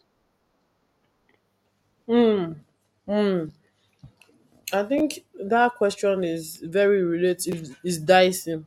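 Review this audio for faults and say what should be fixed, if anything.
Chunks out of order: a 10.67 ms block played one chunk late at 4.98–5.00 s and three chunks late at 7.49–7.53 s after "question is very". Each slip leaves a brief jumbled stutter. Write chunks strictly in sequence, or reorder them before playback.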